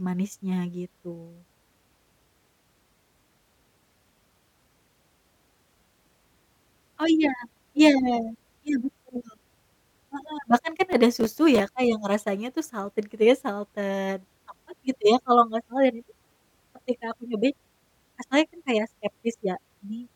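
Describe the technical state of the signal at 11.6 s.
At 11.6 s, processor overload crackle is just ending: from 10.93 to 11.60 s, roughly fifteen sub-millisecond buffers were skipped, leaving hard-edged gaps heard as gritty tearing, seen as scattered vertical broadband streaks and waveform notches.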